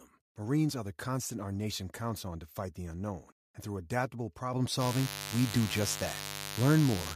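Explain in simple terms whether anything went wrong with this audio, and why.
At 4.53 s the microphone volume stepped up. The software judged the microphone too quiet and turned it up at once. Speech and background get louder together.

From 4.78 s to the end, a mains buzz appears. Electrical interference from the 50 Hz power supply leaks in. It sounds like a steady, fairly loud, raspy hum.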